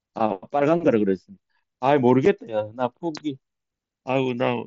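At 2.25 s the speech has a single unconcealed Bluetooth headset packet loss: a hole about 7.5 ms long, which fits one voice packet between headset and phone going missing, with silence or an idle pattern left in its place because nothing filled the gap. Unlike concealed loss, nothing is smeared or repeated across the gap, and the band-limited, lightly grainy wideband mSBC sound on either side stays intact.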